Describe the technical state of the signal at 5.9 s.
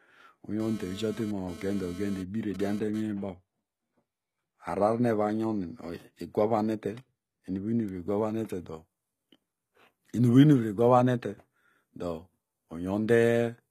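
At 5.9 s the speech has gritty, metallic, lispy s sounds and nothing above 14.9 kHz, as it does throughout. This is likely HE-AAC compression at a low bitrate, around 20 kbps, where the treble is rebuilt from copied lower bands whose harmonics don't line up.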